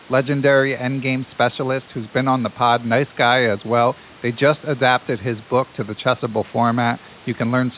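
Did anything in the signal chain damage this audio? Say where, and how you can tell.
No, nothing damaged this audio.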